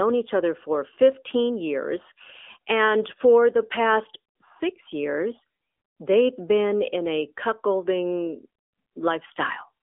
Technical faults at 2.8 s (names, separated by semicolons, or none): AMR narrowband mobile codec